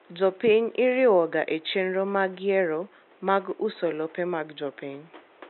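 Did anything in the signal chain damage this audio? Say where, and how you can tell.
No, nothing in the chain seems to have hurt this speech; the only extra thing you can hear is a bit of room noise sitting about 30 dB under the talking, which belongs to the space the microphone was in rather than to any stage of the system.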